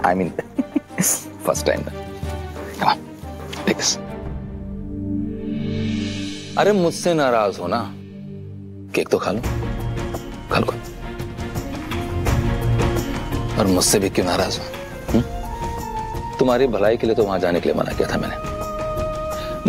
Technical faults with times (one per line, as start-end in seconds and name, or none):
8.96 dropped samples